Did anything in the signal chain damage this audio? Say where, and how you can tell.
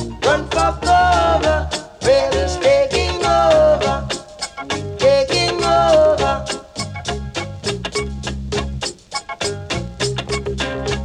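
No, nothing in the signal chain damaged this audio.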